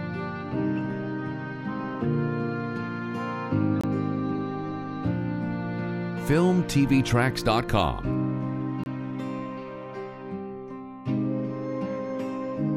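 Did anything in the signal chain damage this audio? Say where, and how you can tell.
Yes. A gap between chunks appears at the chunking stage, where the audio was cut into 5-second blocks for transfer or storage and silence was left between them, about 25 ms at each join. You can hear two short holes, at 3.81 to 3.84 s and 8.84 to 8.86 s, about 5 s apart. The sound on either side is intact. It is simply interrupted, not lost.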